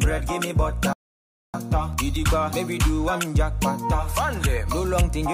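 A rebuffering stall interrupts the audio at 0.93 s. The sound drops to silence and stays there until 1.54 s. It then picks up exactly where it stopped, with nothing skipped. This is the player running out of downloaded audio and waiting for more data to arrive. The gap adds about 0.61 s to the playback time. No content is lost, so the pause is pure added delay.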